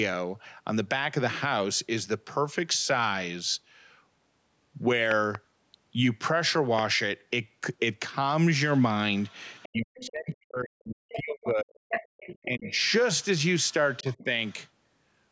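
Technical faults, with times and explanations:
5.11–5.37 s and 6.79 s, loud pop: two sharp pops in quick succession, then a single pop, each about 15 dB above the speech, which carries on underneath. A sudden voltage step, likely from a plug, switch, static or driver glitch, was added to the signal.
8.73–10.09 s, 11.09–11.22 s, 11.89–12.91 s and 13.59–14.54 s, other side's voice leaking through: a second voice sits under the talker, about 10 to 25 dB down. The far side was played on a loudspeaker, and the echo canceller likely left part of it in the microphone.
9.68–11.82 s, 12.45–12.78 s and 14.02–14.28 s, speech suppressed in double talk: the talker's voice dips and cuts out in pieces, by as much as about 40 dB in the first stretch and about 15–20 dB later. With both sides talking, the canceller likely turned everything down.
12.10–12.17 s, background gated by the echo canceller: the room sound drops out for about 70 ms, falling by about 40 dB, then returns. 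The echo canceller clamped the microphone hard while the loudspeaker was playing, then released it.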